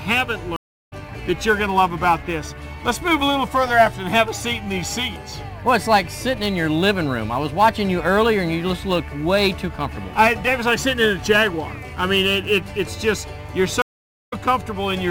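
Sample clock jitter runs through the whole clip: timing wobble of several microseconds leaves a roughness roughly 25 dB below the sound, unlike steady noise because it swells with loud, bright passages. A stream reconnect at 0.56 to 0.93 s drops out for 325 ms and resumes about 300 ms further on, so material is skipped rather than merely paused. Another at 13.82 to 14.33 s goes silent for 472 ms and picks up only a few tens of milliseconds later.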